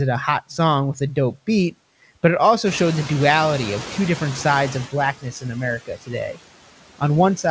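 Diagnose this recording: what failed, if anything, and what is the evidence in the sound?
Noise suppressor artifacts run through the whole clip. The background sinks between phrases and swells back under the speech, with about 17 dB of reduction overall. The fault sits in the call-processing stage, where the suppressor applies frame-by-frame band gains to whatever it judges steady noise.

The noise suppressor is catching up from 2.66 to 4.87 s, just after "beat but it". The room noise jumps by about 12 dB near 2.5 s and at first comes through with only about 11 dB of reduction. The suppressor's noise estimate needs roughly 2.2 s to adapt before the noise sinks again.

Speech is cut by the noise suppressor at 5.13 to 5.56 s and 5.78 to 6.38 s. In each span, roughly 0.3 s of speech turns faint or swallowed, dropping by about 18 and 17 dB. The suppressor mistook these quieter speech components for noise and attenuated them along with the background.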